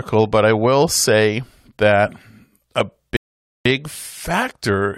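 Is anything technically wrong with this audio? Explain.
Yes. At 3.17 s the speech cuts to silence. This is a rebuffering stall. The player ran out of downloaded audio and waited for more. Playback resumes at 3.65 s exactly where it stopped. Nothing is lost, but about 0.49 s of dead air is added.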